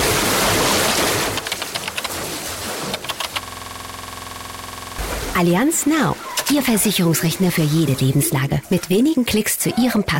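A system hang loop from 3.43 to 4.99 s: a 46 ms fragment repeats as a 21.5 Hz stutter, fitting a stalled 2048-sample ring buffer.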